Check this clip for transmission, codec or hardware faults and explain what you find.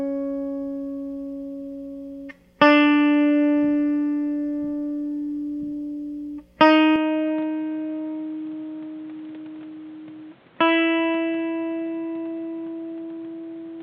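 One fault is audible in this music. From 6.96 s to the end, the sound abruptly turns dull and boxy with no gap: nothing reaches above 4.3 kHz, the level falls by about 5 dB, and new background noise sits roughly 30 dB below the music. The likely cause is an input switched to a poorer device, whose narrower band, lower gain and own noise replace the original microphone's.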